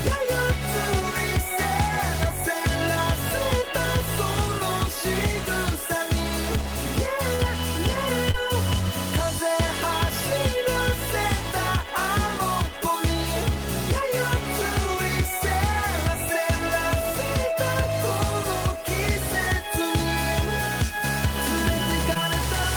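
Short concealed packet loss occurs at 7.35–7.41 s, 8.31–8.36 s and 22.14–22.17 s: roughly 20 ms of audio arrived too late each time, and the receiver extended the preceding sound to cover it, heard as brief smears or wobbles, the first with a slight timing shift.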